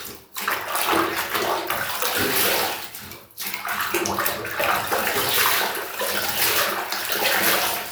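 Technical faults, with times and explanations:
Nothing technical stands out here; the sounds come through without any faults to report.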